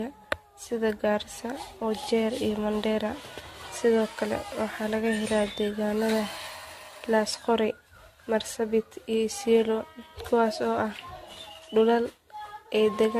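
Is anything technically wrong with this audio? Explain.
Yes. Throughout the speech there is generation loss, likely from about seven rounds of lossy encoding, consistent with AAC at roughly 64 kbit/s. Each pass requantises on a shifted frame grid, so artefacts pile up into swirly, hollow smearing with blurred consonant attacks. Nothing remains above 14 kHz. That compounded smearing is worse than one encode at this bitrate would give.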